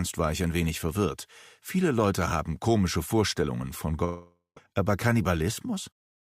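At 4.04 s the sound turns into a fading buzz that dies into silence for about 0.16 s, then resumes at 4.57 s with roughly half a second missing. This is likely a long network dropout, where the receiver stretched the last audio until packets returned.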